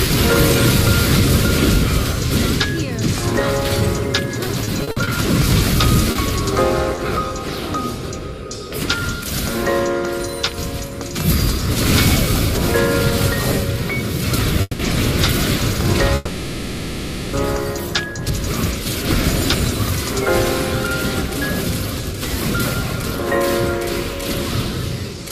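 Repeated packet loss, with its typical robotic sound, runs from 4.47 to 7.00 s. The audio breaks up seven times in that stretch, and each hole is bridged by stretching the last received sound forward, which gives the choppy texture. The longest single gap is 50 ms. About 220 ms is filled in this way and about 80 ms of the original audio is lost outright. Concealment covers roughly 9% of the span. Two call audio freezes follow, at 14.61 to 14.82 s and at 16.15 to 17.36 s. In each, the last sound is held and fades as a buzz or hiss, with a brief 10 ms of silence in the first. The audio then resumes where it stopped, so nothing is missing. The likely cause is packets held up in transit until the jitter buffer drained, adding about 180 ms and 1.18 s of delay respectively. From 24.86 to 25.25 s a jitter buffer speed-up plays the audio at about 113% of normal rate without a change in pitch, so the end sounds hurried. 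The receiver trims a series of short pitch-period segments, around 70 ms in total, to cut back extra buffering.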